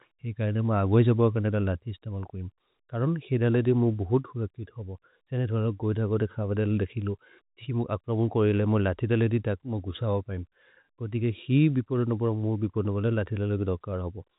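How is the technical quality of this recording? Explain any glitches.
The technical quality of this recording is sound, and there are no glitches to explain.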